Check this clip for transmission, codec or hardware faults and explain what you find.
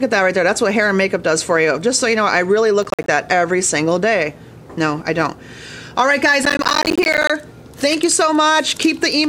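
There are two bursts of processor overload crackle, from 2.83 to 3.08 s and from 6.43 to 7.30 s. The processor repeatedly missed its deadlines for short audio buffers, and each miss left a hard-edged gap of silence. The gaps sound only about 10 ms long, which fits small buffers, and they come densely, a dozen or so in the first burst and a few dozen in the second. Together they make a gritty crackle riding on the sound. Network packet loss leaves sparser, isolated dropouts instead, while here the tearing is continuous and stops cleanly when the load eases.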